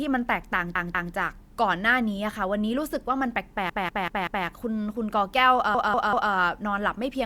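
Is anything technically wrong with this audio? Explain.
Yes, the speech has repeated frames. A roughly 192 ms block of compressed data is decoded again and again: twice more from 0.75 to 1.14 s, four times from 3.70 to 4.46 s, and three times from 5.74 to 6.32 s. Each repeat is heard as a stutter. Unlike a dropout, nothing is lost. The clip simply runs longer.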